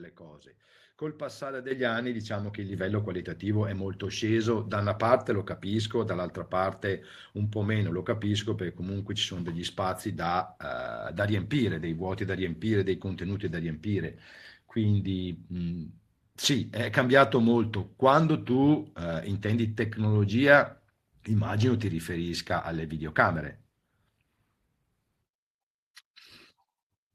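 In this speech, level and background jump up together at 1.71 s by about 8 dB and again at 2.73 s by about 4 dB: microphone volume stepped up by software.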